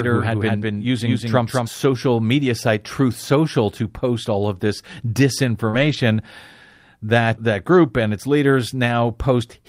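A doubled audio track runs from the very start of this speech recording to 1.68 s: a second, full-band copy of the same speech sits roughly a fifth of a second behind the original and about 5 dB quieter, with no decay or room colouring, so it reads as a flat slapback echo rather than reverberation. It is already under way when the clip begins and cuts off abruptly at 1.68 s. The likely cause is the signal being captured twice, once through a slower path, or an edit leaving two misaligned copies in the mix. A lost packet rebuilt from error correction follows at 1.93 to 1.95 s, just before "media site": one 20 ms stretch was lost in transit and replaced from a low-bitrate duplicate carried in the next packet, so there is no gap, only a brief patch of rougher, noisier sound. A second error-correction rebuild covers 5.73 to 5.95 s, about 120 ms. That fits six separate 20 ms packets. A short concealed packet loss sits right at the edge of that span, from 5.69 to 5.75 s. 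About 40 ms of audio never arrived in time, and the decoder bridged it by extending the preceding sound for about 38 ms before blending back into the real signal, which is heard as a short smear or wobble.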